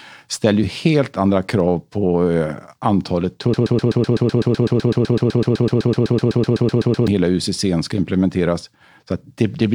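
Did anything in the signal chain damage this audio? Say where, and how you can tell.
Yes. A broken-record loop runs from 3.54 s to 7.08 s in this speech. A fragment about 126 ms long repeats exactly, back to back, 28 times. The repeats are identical, with no variation between them. That points to a stall in the playback or streaming stage. The likely cause is a player or stream buffer that kept re-sending the last block it held. The speech that belonged in those three and a half seconds is lost.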